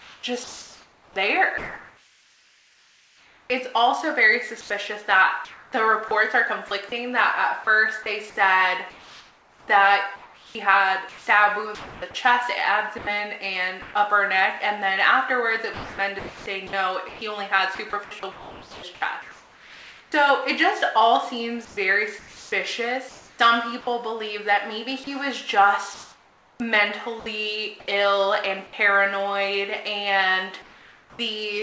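From 0.0 to 13.94 s, 15.74 to 20.12 s and 21.65 to 27.26 s the sound is chopped by the voice detector, likely because the sender repeatedly toggled transmission. Quieter portions are swapped for comfort noise, about 5.2 s, 2.3 s and 1.6 s respectively, so the audio stutters.

Between 28.67 and 28.73 s the sound is dropped by the voice detector, which likely classed a quiet stretch as background and stopped sending. About 40 ms of sound is lost under 60 ms of steady fill before the signal resumes.

From 30.62 to 31.19 s comfort noise stands in for the background, likely from discontinuous transmission during a pause. The real ambience, about 29 dB below the loud parts, gives way to a featureless hiss roughly 3 dB quieter. Throughout, nothing is audible above 8 kHz, consistent with a 64 kbps G.722 call path.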